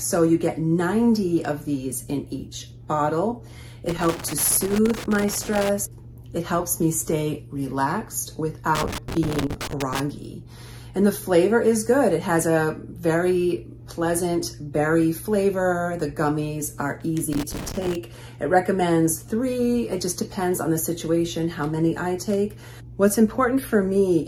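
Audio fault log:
3.89–5.69 s, 8.75–10.00 s, 17.33–17.95 s: loose connector crackle. Irregular bursts of scratchy crackle break up the sound. A worn or dirty contact is opening and closing rapidly, chopping the signal into fragments.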